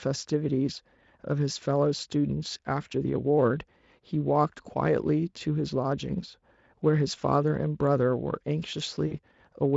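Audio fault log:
9.07–9.18 s, VoIP packet loss concealed by the speech codec: the decoder bridges a 40 ms gap by extrapolating its last pitch and filter, giving a fading buzzy tone or coloured noise; the spectrogram shows a frozen, dimming spectrum.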